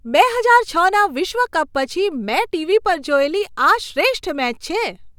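No technical faults can be heard anywhere in this speech recording; the signal stays steady and intact throughout.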